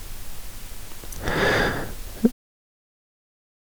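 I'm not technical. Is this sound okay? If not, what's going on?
No. At 0.72 s there is a brief chirp or blip in the speech. This is damaged data in a compressed stream: a small piece of the stored audio file got corrupted, so the player briefly misread it before finding its place again.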